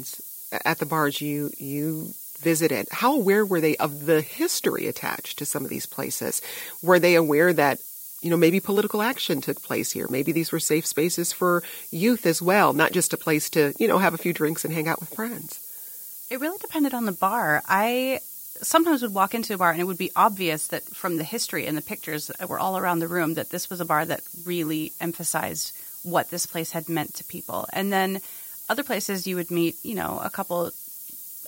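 Speech reduced throughout to low bit depth with noise shaping, about 6 bits, with the rounding error fed back so its energy is pushed toward high frequencies. The result is a steady, thin hiss that climbs sharply toward the top of the band, sitting only about 10 dB below the speech for the whole clip.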